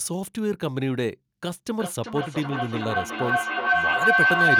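At 1.79 s a feedback howl begins and runs to the end: a loop between microphone and loudspeaker gains level each pass, so the repeats swell instead of fading as an echo would, narrowing to a tone near 1.5 kHz, pulsing roughly every 0.4 s and peaking about 6 dB above the speech.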